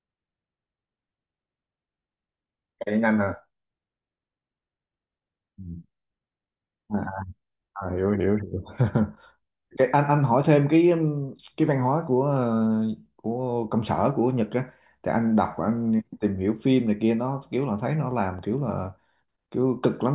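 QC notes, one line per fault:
No faults detected.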